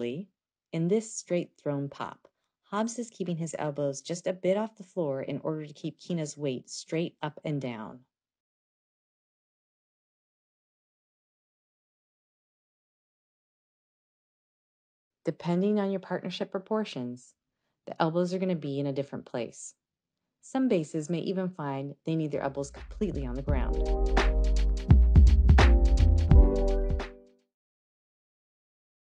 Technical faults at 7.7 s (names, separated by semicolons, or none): none